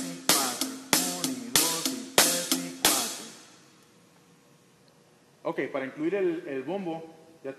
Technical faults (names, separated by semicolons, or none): none